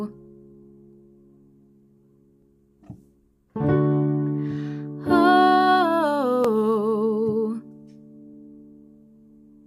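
Overlapping chunks at 2.42–2.45 s and 6.45–6.47 s: about 21 ms of audio repeats at 4 s chunk joins, giving a stutter rather than a dropout's silent gap.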